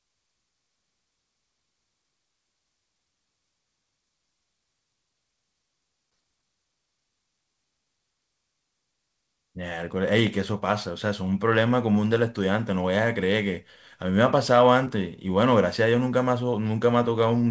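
At 6.10 s and again at 14.85 s, short concealed packet loss leaves a brief smear as the decoder extends the preceding sound. On a spectrogram, a smooth patch interrupts the 8 kHz-limited call band.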